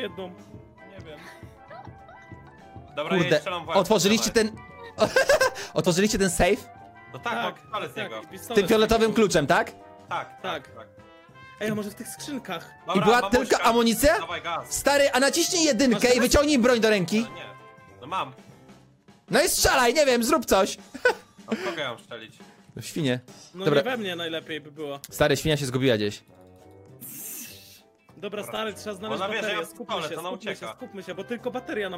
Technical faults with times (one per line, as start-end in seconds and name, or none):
none